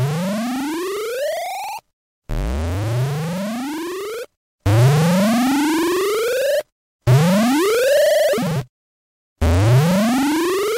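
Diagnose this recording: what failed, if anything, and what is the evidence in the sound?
From 7.32 s to the end, the sample-format conversion stage shows crude rate conversion: a gritty, inharmonic fizz that tracks loud and bright sound, roughly 25 dB below the signal. It points to 44.1 kHz converted to 48 kHz by nearest-sample repetition. On a spectrogram, faint unrelated partials appear there.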